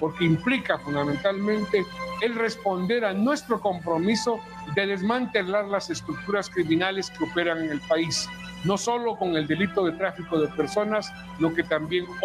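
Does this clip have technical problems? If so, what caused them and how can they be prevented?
No, there are no technical problems to address here.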